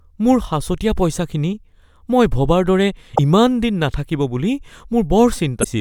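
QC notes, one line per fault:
3.12–3.19 s and 5.61–5.66 s, damaged data in a compressed stream: two brief glitches in the speech, roughly 66 ms and 54 ms long. What you're hearing is the decoder hitting corrupted bytes in the compressed stream. It can't make sense of those frames, so it spits out garbage or drops them, loses its place, and has to hunt for the next valid frame header before normal audio picks up again.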